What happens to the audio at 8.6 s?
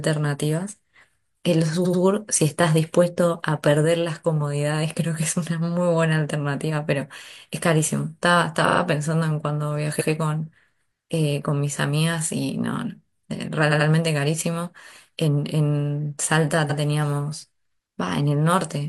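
A short run of compressed audio was sent or written more than once, so the decoder plays the same fragment again: repeated frames, from 8.64 to 8.78 s. The repeating block is 42.7 ms long, which fits a single compressed frame, and it is heard three extra times in a row. The sound stutters briefly, like a rapid machine-gun repeat of one sliver of speech, and the speech from that point on lands 128 ms later than it should.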